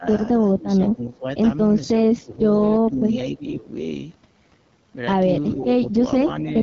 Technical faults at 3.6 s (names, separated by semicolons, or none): AMR wideband (HD Voice) codec; speech suppressed in double talk